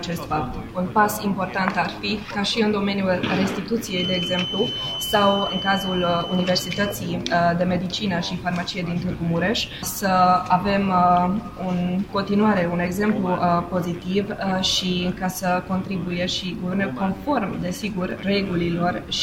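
A thin, steady whistle at 3 kHz sits behind the sound from 3.85 to 7.03 s, roughly 10 dB under it and swelling and fading slowly in level. This feedback whistle is likely a loudspeaker-to-microphone loop hovering at the edge of instability without running away.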